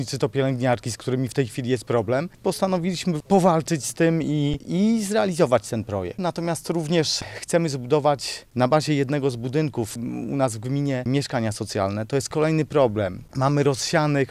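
At 4.53 s an underrun with held sample leaves the output frozen at its last level for 7 ms. Unlike a drop to silence, it barely clicks, and the sound resumes softly where it stopped.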